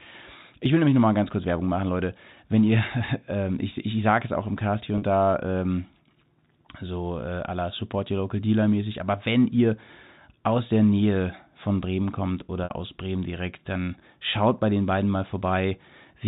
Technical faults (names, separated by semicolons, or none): packet loss with pitch repetition